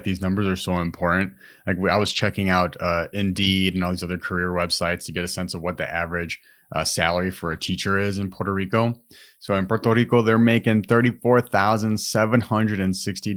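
Brief rough, noisier patches with no actual dropout occur at 1.97–2.19 s just before "out uh", 3.43–3.45 s before "and all these other", 7.47–7.73 s, 11.01–11.11 s after "they're making", and 11.93–11.95 s. Each is a lost packet rebuilt from error correction: the decoder played the low-bitrate copy carried in the following packet, so the gap is filled but coarser.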